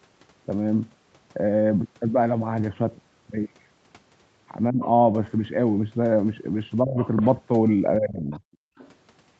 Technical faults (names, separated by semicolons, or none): speech suppressed in double talk; other side's voice leaking through; background gated by the echo canceller